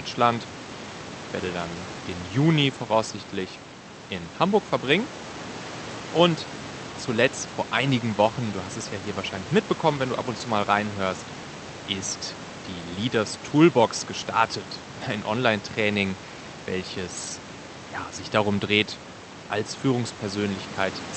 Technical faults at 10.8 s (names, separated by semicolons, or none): none